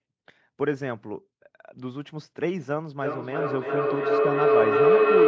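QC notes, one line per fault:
2.99 to 5.27 s, feedback howl: from here to the end, each pass through the room loop between microphone and loudspeaker returns louder, so the sound narrows to a tone around 400 Hz. It pulses about every 300 ms and peaks about 9 dB above the speech.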